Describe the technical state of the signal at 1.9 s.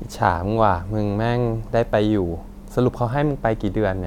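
At 1.93 s the speech skips ahead, likely a dropped buffer (overrun) losing about 10 ms; the waveform shows an abrupt discontinuity, the spectrogram a thin vertical broadband line.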